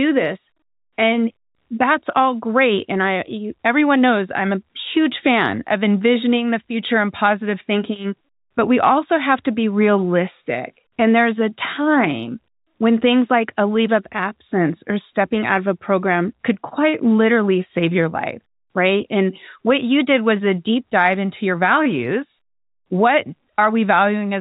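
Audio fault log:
No faults turn up here at all; the speech just sits in the narrow band of G.711 telephone coding, with nothing above 4 kHz, and there's nothing to log.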